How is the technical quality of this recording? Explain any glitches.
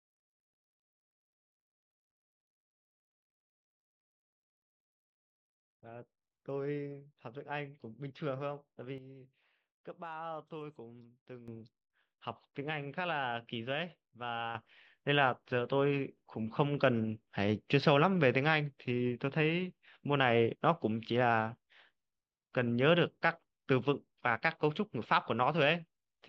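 The recording has two abrupt level changes. A sudden gain jump at 8.98 s drops the speech and background by about 10 dB until 11.48 s. A second jump at 14.55 s raises everything by about 9 dB to the end. Both likely come from a gain setting applied instantly, without a ramp.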